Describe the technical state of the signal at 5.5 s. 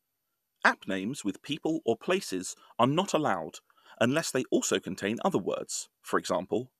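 At 5.5 s the speech signal is intact, with no audible technical fault at that moment.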